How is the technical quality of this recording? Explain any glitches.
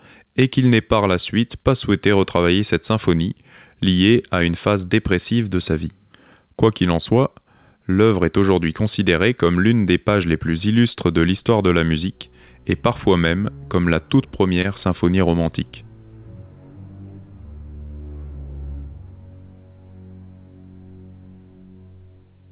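The recording has one glitch, heard through a narrowband call path with nothing above 4 kHz, which fits G.711 A-law at 64 kbps.

At 14.62–14.66 s there is short concealed packet loss. About 20 ms of audio arrived too late, and the receiver filled the gap by extending the preceding sound before rejoining the real signal. It is heard as a brief smear or wobble. On a spectrogram it appears as a smoothed, repeated patch, and on the waveform as a filled-in stretch blended back into the real signal.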